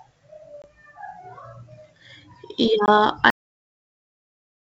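Packet loss on an ADPCM call hits this wideband speech recording twice, at about 0.62 to 0.65 s and 2.86 to 2.91 s, each time consistent with a single lost packet of about 20 ms. The gap was filled with silence, and the decoder's adaptive predictor and step size lost track of the sender's, so each hard-edged hole is followed by speech returning slightly distorted before it settles. The G.722 coding itself keeps the band open to 7 kHz. The second fault is a cut-off end: the final buffers were never written or played, so at 3.30 s the speech stops mid-sound and drops straight into digital silence with no decay, which continues to the end of the clip.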